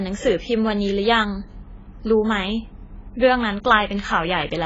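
Throughout, the speech sounds dull and smeared, with nothing above 7.6 kHz and a warbling texture, likely heavy AAC compression at a bitrate around 16 kbps.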